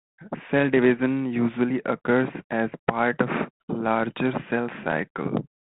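Nothing faulty is audible anywhere in this speech recording.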